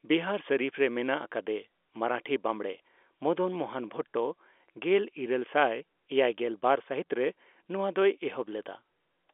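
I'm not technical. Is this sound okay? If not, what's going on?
Yes, it's fine: it sounds like an ordinary landline phone call, and nothing in it is going wrong.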